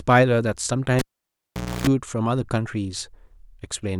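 Speech clip where, at 0.99 s, the cable gets pulled and plugged in: a pop, about 830 ms of near silence ending with roughly 286 ms of 60 Hz buzz, another pop at 1.87 s.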